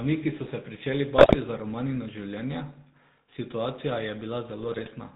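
From the start, the whole clip carries the GSM full-rate codec sound: a buzzy, gravelly roughness sitting on the speech, with nothing coming through above 4 kHz. That's what you get when the vocal tract is modelled as a filter and driven by a sparse, regularly spaced pulse train that keeps only a third of the excitation samples. The damage is plainly audible and fits the old 13 kbit/s full-rate coder.

Right after "so se pričeli", from 1.18 to 1.35 s, GSM bit errors break in. Corrupted filter, pitch and gain values make the decoder bend the spectrum and jump the level frame after frame, so the speech turns into squawks, pops and gargling. The length points to about eight hit frames. A second, milder burst runs from 4.62 to 4.89 s, and its span suggests around a dozen frames.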